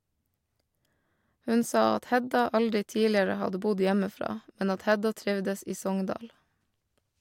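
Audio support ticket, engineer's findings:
Listened to the whole speech clip and found nothing to flag, so there's no fault to log on this ticket.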